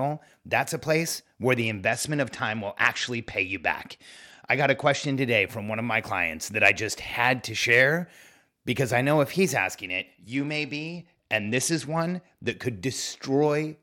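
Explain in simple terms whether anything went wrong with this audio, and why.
Twice the speech turns dull and gritty: from 1.61 to 5.17 s, just after "that's a place where" and ending before "today from one of", and again from 9.84 to 12.52 s, after "I know if he's". This is a Bluetooth SBC bit pool drop. The wireless link got congested, so the sending device cut how much data each slice of sound could use. The highest frequencies got little or no data and the rest were stored roughly, until the link recovered.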